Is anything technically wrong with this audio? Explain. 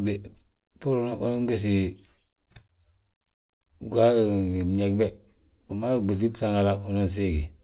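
No, nothing is wrong: the speech came over a call path, and the band ending at 4 kHz fits a narrowband telephone codec such as G.711 mu-law, which is expected behaviour, not a defect.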